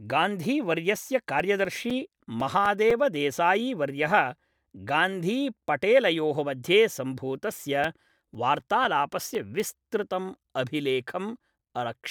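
From 1.40 to 3.41 s, CD scratch ticks break into the speech. Nine short ticks arrive at a steady rate of about four a second. Each is only a few milliseconds long. They vary in strength. A scratch has wiped out more data than error correction can rebuild, once per disc turn. The player patches or mutes those samples. After "गान्धीपटेलयोः मध्ये", the ticks return from 7.09 to 9.60 s, eleven at a similar rate.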